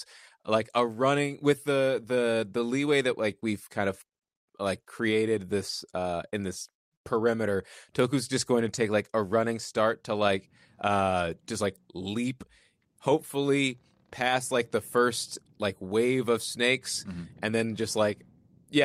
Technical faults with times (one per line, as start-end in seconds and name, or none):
none